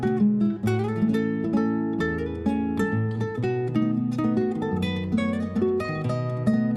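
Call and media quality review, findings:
Dull, band-limited sound with gurgling, granular distortion throughout. Upper bands flicker in and out. Remaining bands coarsely quantised. Likely MP2 compression, plainly audible, fitting an 80 kbps rate. Layer II starves its 32 sub-bands of bits and switches the top ones off.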